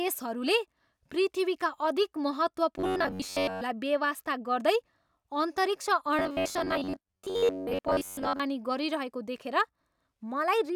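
Just after "पृथ्वीका अधिक", from 2.78 to 3.62 s, the speech turns into robotic sound from repeated short buffers. It returns from 6.19 to 8.40 s. Both times a rigid, metallic buzz sits at about 93.8 Hz. That fits a chunk of roughly 10.7 ms being replayed for most of each span. Fresh audio was likely arriving too seldom, so the real signal was skipped. The buzz follows the original speech only roughly.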